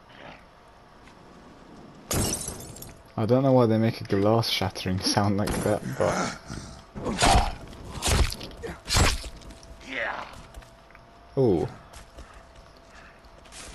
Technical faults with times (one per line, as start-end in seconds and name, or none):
none